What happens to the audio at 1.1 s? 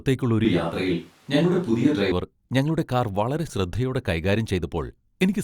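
At 1.1 s the speech sits inside a switch to a distant microphone, from 0.45 to 2.12 s, likely a failed close mic. It turns abruptly roomy and hollow, with thinner bass and faint room noise at a similar level.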